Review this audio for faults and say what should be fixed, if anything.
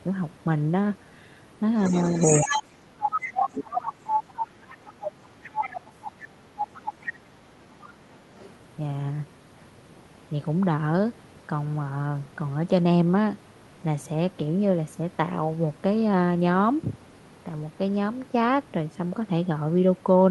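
The other side's voice leaks through at 1.85–2.71 s and 3.1–5.1 s, about as loud as the talker. It leaks more quietly at 5.43–5.81 s and 6.59–7.12 s, and only faintly at 8.39–8.49 s. The likely cause is loudspeaker echo left behind by the canceller, which shows as a second harmonic pattern overlapping the talker's.

Speech is suppressed in double talk at 2.44–5.02 s, dipping up to about 25 dB for roughly two seconds, and at 6.96–7.53 s, dipping about 20 dB. This is likely the canceller ducking both voices together, and it shows as waveform troughs and missing spectrogram energy.

Better acoustic echo cancellation with proper double-talk detection, or a headset instead of a loudspeaker, would prevent both.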